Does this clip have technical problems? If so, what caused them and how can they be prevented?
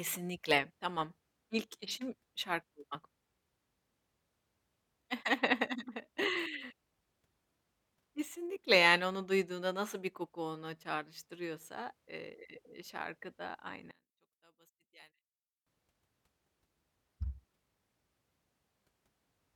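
Yes. From 13.91 to 15.66 s, right after "çağrıştırıyorsa eee şarkı da", the speech drops by about 23 dB to a faint residue, then returns. The likely cause is one channel inverted: with one side's polarity flipped, the shared centre content cancels in the mono sum. On a waveform the envelope shrinks sharply there, and a spectrogram shows the whole band nearly gone with only weak traces left. Checking polarity with a correlation meter before export prevents it.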